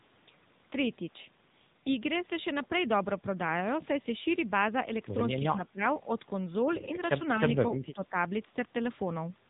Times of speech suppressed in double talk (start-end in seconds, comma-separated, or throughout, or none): 5.39-5.82, 7.86-8.14